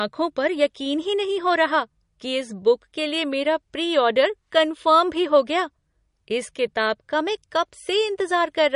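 Throughout the speech, the treble stops dead at about 10.6 kHz and the sound turns watery, with swirling, smeared sibilants, which points to MP3 compression at a low bitrate of around 40 kbps as the likely cause. A spectrogram shows a flat ceiling there, with weak components flickering in and out below it.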